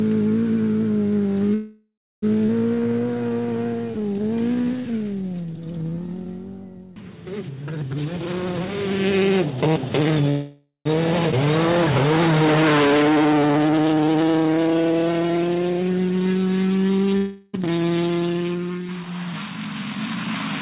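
Audio carried over a call path whose band stops at 4 kHz, consistent with G.711 mu-law at 64 kbps, shows a run of jitter-buffer and packet-loss faults. From 1.54 to 2.24 s there is a call audio freeze: the last sound is stretched into a fading buzz for 682 ms, ending in about 300 ms of silence, before the audio resumes where it stopped. Nothing is lost, but the playout delay grows by 682 ms. The same happens from 10.30 to 10.87 s, with 559 ms filled and about 130 ms of silence at the tail. Both are likely caused by packets held up in transit until the jitter buffer emptied. A skip ahead follows each freeze, as the receiver sheds the built-up delay. At 2.46 to 2.50 s, roughly half a second of audio is dropped and the two sides are joined with only a 20 ms bridge. At 11.31 to 11.34 s, about 200 ms is cut, with a 7 ms join, so the content jumps forward abruptly in both places. A jitter buffer slow-down runs from 2.75 to 6.26 s, where the receiver repeats single pitch periods and slivers of pauses to rebuild its reserve. 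Playback runs at 86% speed at unchanged pitch, adding 491 ms, so sounds are drawn out. A milder slow-down from 11.45 to 14.24 s plays at 93% and adds 211 ms. The opposite correction, a jitter buffer speed-up, occupies 7.93 to 10.23 s. There the buffer held more audio than its target, so short pitch-period pieces were cut repeatedly, roughly 0.7 s in total. Playback runs at 126% at the same pitch and sounds hurried. Finally, a long network dropout spans 17.17 to 17.55 s. For 361 ms the preceding sound is continued as a decaying buzz that never reaches full silence, and when audio returns, 360 ms of the original is gone for good.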